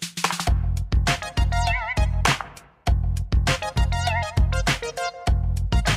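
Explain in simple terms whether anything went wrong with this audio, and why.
Nothing went wrong here.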